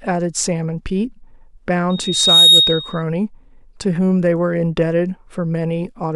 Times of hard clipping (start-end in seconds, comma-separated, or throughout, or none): 2.23-2.59